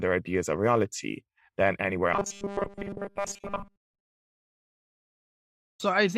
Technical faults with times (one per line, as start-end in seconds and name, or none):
2.14-4.63 robotic sound from repeated short buffers